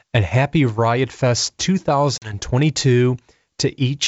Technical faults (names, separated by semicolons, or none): packet loss on an ADPCM call